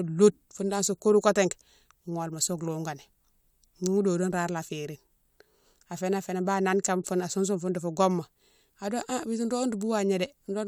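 No technical faults can be heard at any point, so there are none to describe in time order.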